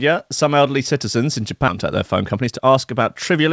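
At 1.68 to 1.70 s, right after "some elderly citizens in", there is a skip ahead. Roughly 0.7 s of audio was discarded while later packets were already queued, so playback jumps straight to the next available audio with no inserted fill. The two sides meet almost directly, so the speech lurches forward abruptly, with a chunk of the sentence simply absent and the end-to-end delay cut by a similar amount.

From 2.21 to 3.47 s a jitter buffer speed-up follows. The receiver was holding more audio than its target, so it trimmed short pitch-period-sized pieces repeatedly, running the speech at about 120% speed while keeping the pitch unchanged. Around 0.3 s is removed in total. The result sounds hurried rather than higher-pitched. Across the clip, the call codec path leaves nothing above 8 kHz, which fits a G.722 link at 64 kbps.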